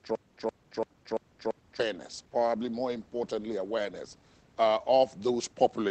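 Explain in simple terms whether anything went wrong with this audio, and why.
From the very start of the clip until about 1.80 s, the sound has a stutter with silent gaps, and it is already under way when the audio begins. A short burst of about 0.15 s plays, then about 0.19 s of dead silence follows, and the pattern repeats five times at a steady rhythm of roughly one cycle every 0.34 s. The likely cause is that playback stalled and kept replaying the last fragment while waiting for more data, so the audio meant for that stretch is missing.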